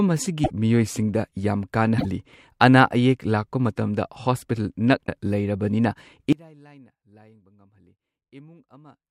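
At 0.43 to 0.50 s, 1.97 to 2.06 s and 5.06 to 5.08 s, the speech jumps ahead with a brief chirp, noise burst or short hole, likely a broken MP3 bit reservoir after dropped frames. The spans fit roughly 26 ms frames. Spectrograms show broadband smears; waveforms show abrupt discontinuities.

From 6.33 s to the end, the mono level drops by about 29 dB, leaving a faint residue, likely one channel inverted so the centred speech cancels. The waveform collapses to a low trace.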